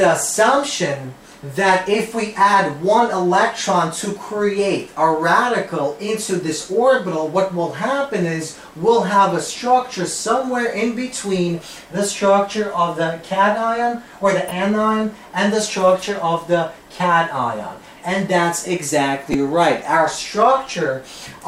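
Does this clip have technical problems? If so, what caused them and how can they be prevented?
Yes. Two short bursts are corrupt frames decoded. The decoder played damaged compressed data, putting energy at wrong frequencies for roughly one frame at 14.48 to 14.52 s and about two frames at 19.32 to 19.35 s, the second much louder, peaking around -5 dBFS against about -15 dBFS. Each is heard as a brief chirp or blip. On a spectrogram they appear as thin vertical smears of misplaced energy, and on the waveform as abrupt spikes. Adding error detection with concealment, such as checksums that mute or interpolate bad frames, prevents this.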